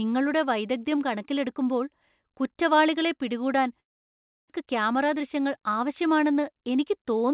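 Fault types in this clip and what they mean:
Long network dropout: From 3.8 s to 4.62 s the sound continues as a fading buzz, then goes silent for about 0.66 s. It resumes with roughly 600 ms missing. The likely cause is a stretch where no packets arrived.
Jitter buffer speed-up: From 5.08 s to 5.85 s the sound runs at 107% speed with unchanged pitch and sounds hurried. The receiver is trimming short pitch-period pieces, about 70 ms in total, to shrink a backlog built up after the gap.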